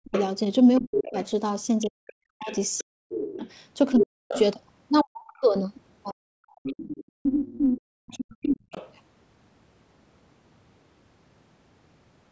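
From 0.0 to 8.75 s the speech repeatedly dips, at worst by roughly 40 dB and for about five seconds in total. This is likely speech suppressed in double talk, with the echo canceller turning the talker down along with the echo. On the waveform it shows as sudden gouged gaps, and on the spectrogram as vanishing upper bands.

Underneath, the other side's voice is leaking through from 0.14 to 4.4 s, only about 5 dB below the talker. It returns fainter, about 15 dB down, from 6.63 to 8.92 s. This is likely loudspeaker echo the canceller left behind, and it appears as a second set of harmonic traces on the spectrogram.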